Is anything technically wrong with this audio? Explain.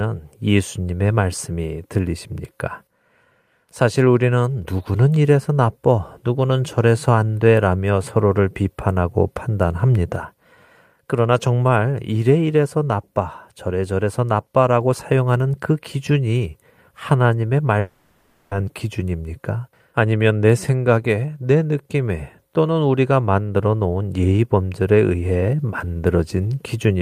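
Yes. From 17.79 to 18.53 s, a long network dropout, likely: 0.72 s of speech never arrived. The receiver stretched the last sound into a fading buzz or hiss that covers the gap with no silence, and the speech resumes with that part gone. Its length, most of a second, sets it apart from a brief packet glitch.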